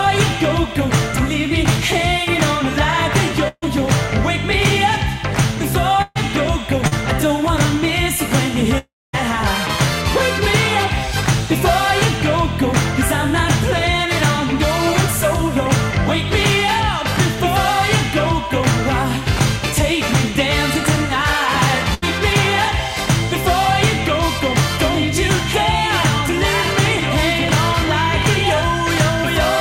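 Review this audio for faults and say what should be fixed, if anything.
At 3.48–3.64 s, 6.02–6.17 s and 21.94–22.04 s the sound stalls into a held buzz or fading hiss and then jumps ahead. This is a burst of packet loss: about 120, 140 and 80 ms of audio never arrived, so the receiver extended the last sound for roughly 140, 130 and 80 ms. The first gap also ends in about 40 ms of silence.

Around 6.87–6.93 s there is a brief smear lasting about 40 ms. This is short concealed packet loss. Roughly 40 ms arrived too late for the decoder, so the receiver continued the preceding sound for that stretch and then blended back into the real signal.

From 8.78 to 9.15 s the sound trails off as a fading buzz or hiss, drops to about 230 ms of silence and resumes further on. The likely cause is a long network dropout: about 360 ms never reached the receiver, and concealment covered only the opening part.

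To prevent these faults, fix the network path by reducing congestion, prioritising audio traffic, and adding forward error correction and a modestly deeper jitter buffer so that lost or late packets are recovered.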